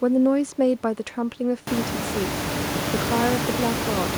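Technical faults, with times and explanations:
No technical faults detected.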